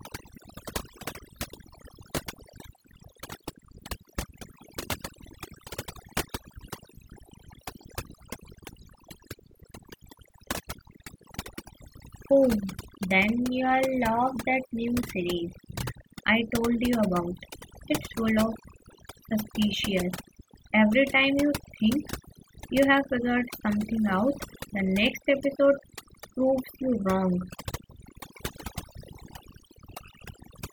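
A noise reduction stage was set too aggressively, and its effect, overdone noise removal, runs from start to finish. Whenever a frequency band drifts close to the tool's noise estimate, it is pulled almost to nothing, taking the softer parts of the speech with it. Between phrases the background drops to near silence scattered with twinkling specks.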